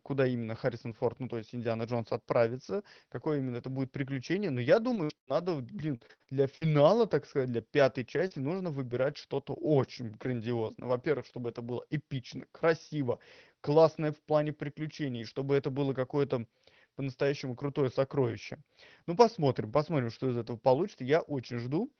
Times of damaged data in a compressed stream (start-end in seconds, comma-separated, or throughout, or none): none